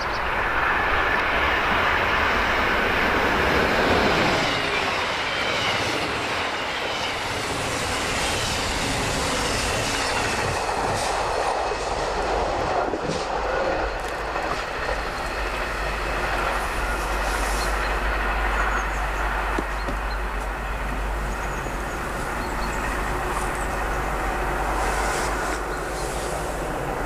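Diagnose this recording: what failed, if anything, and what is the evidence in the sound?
Nothing failed: no stage in the chain leaves an audible fault anywhere in the recording.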